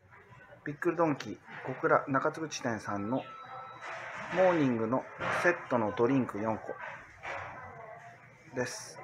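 No audible technical faults present.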